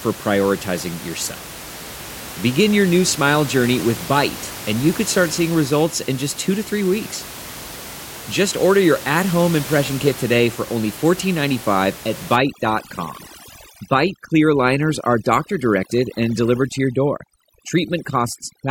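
A speech recording whose last stretch, from 12.36 s to the end at about 18.7 s, shows overdone noise removal. Before that point the room noise sits about 15 dB below the voice. From 12.36 s the background drops and breaks up into twinkling specks, because bands close to the noise estimate are pushed far down together with the quieter parts of the voice. Codec artefacts would sound swirly throughout, not begin abruptly.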